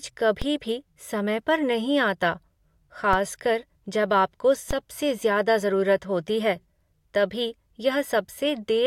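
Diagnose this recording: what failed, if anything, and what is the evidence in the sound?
The converter stage shifted its zero reference three times, producing a DC step at 0.42 s, 3.13 s and 4.71 s, each of about -16 dBFS (about -15 dBFS at the last). Every jump in the waveform's baseline is heard as a low thump while the speech carries on unchanged. The offset doesn't hold: a 20 Hz high-pass pulls it back toward zero, so each thump is followed by a drift back toward centre.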